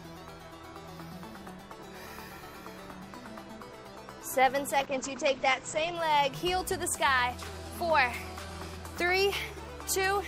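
The audio has a call bitrate drop from 4.8 to 6.01 s. The call's bandwidth estimate collapsed, and the codec was forced from a rate consistent with about 96 kbps down to one consistent with about 11 kbps for roughly 1.15 s. The sound turns coarse and muffled because coding gets cruder and the top band is discarded. On a spectrogram, energy above 8 kHz vanishes abruptly against the earlier 20 kHz extent, then returns. The waveform shows little change.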